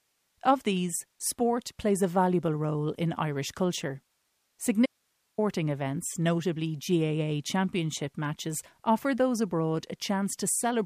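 It's a speech clip with an audio dropout to a faint residue from 4.86 to 5.38 s, just before "events notably". For about half a second the speech cuts out abruptly, leaving only hiss roughly 45 dB down, likely because the signal was lost while the path after the break stayed live.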